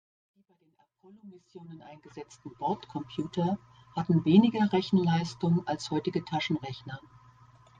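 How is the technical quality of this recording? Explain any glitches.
The recording has clearly audible compression damage all the way through. It opens with a clean, gradual fade-in from the very start to about 2.7 s, with no click at the edge.

The fault is MP3 compression, heard across the whole clip. The speech sounds watery and swirly, with chirpy, metallic sibilants. That likely comes from an encoder starved of bits, consistent with a rate around 64 kbps, dropping quiet frequency detail frame by frame.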